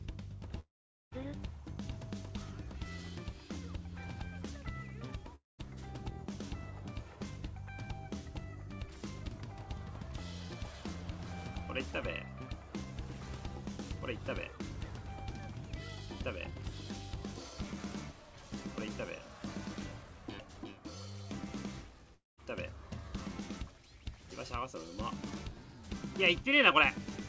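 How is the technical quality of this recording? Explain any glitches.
The sound breaks up three times, in a pattern that points to a long network dropout. The gaps run from 0.60 to 1.14 s, 5.35 to 5.61 s, and 22.14 to 22.40 s. About 0.52 s is lost in the first and 0.24 s in each later one. Packets likely stopped arriving. The receiver stretched the last sound into a fading buzz, then left silence of about 0.45 s and 0.18 s. The sound resumes with that stretch gone. Throughout, nothing is heard above 8 kHz, consistent with a G.722 call codec.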